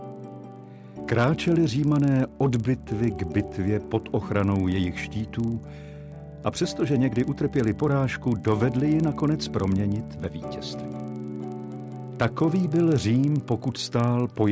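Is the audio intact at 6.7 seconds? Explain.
No. At 6.7 seconds, as across the whole clip, a rough buzz rides on the sound at 25 Hz, a train of small ticks 40 ms apart that is present only while there is signal. This is a resampler restarted on every block. The sound points to a 48 kHz to 16 kHz conversion in which each 40 ms block was converted on its own, so every block edge lacked its true neighbouring samples and carries a small error.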